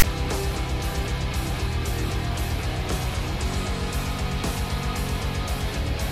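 The audio opens with file tags played as audio, from 0.00 to 0.03 s. Text metadata decoded as samples gives a hard-edged, one-sided rasp, then padding drops it to silence. Unlike a simple start-up click or DC thump, it carries a brief noisy texture.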